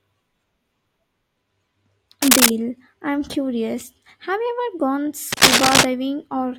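At 2.22 to 2.50 s, just before "I'm curious", and again from 5.32 to 5.85 s, a scratchy, rustling burst sits over the speech, a few decibels louder than it. This is cable scratch noise, likely from a worn cable or connector being moved, its contact resistance fluctuating rapidly. Its dense, irregular crackle sets it apart from evenly spaced clicks and from a steady hiss.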